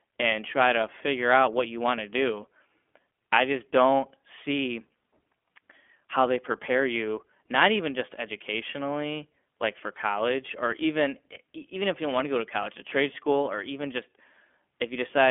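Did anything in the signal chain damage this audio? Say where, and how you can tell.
Yes, at the codec stage, throughout the speech. It is an iLBC codec: the band runs from about 250 Hz to 3.4 kHz, nothing survives above 3.6 kHz, and a plainly audible rough, synthetic texture sits on the voice. Each short frame's excitation is coded on its own, which fits the 20 ms, 15.2 kbps mode. A plain telephone filter would narrow the band just as much, but it would leave the voice smooth rather than grainy.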